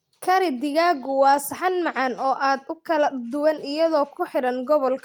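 No technical faults can be heard anywhere in the speech recording.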